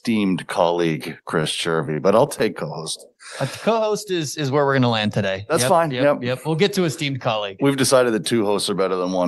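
Between 1.41 and 2.42 s the speech hitches nine times, none over 26 ms: repeated stalls (stutter), with late packets draining the jitter buffer while the last sound is stretched.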